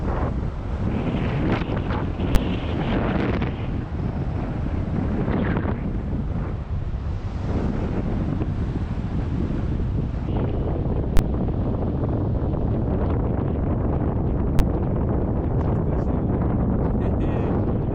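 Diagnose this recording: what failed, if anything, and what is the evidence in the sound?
A processing calculation produced infinite or invalid numbers, and the float-to-integer sample-format conversion pinned them to one extreme value: invalid numbers at full scale. Each block sits flat, far beyond the audio's peaks, heard as a single bang at 2.35 s, 11.17–11.19 s and 14.59 s.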